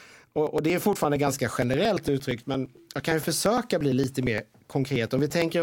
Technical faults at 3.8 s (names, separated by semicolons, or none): periodic USB or driver dropouts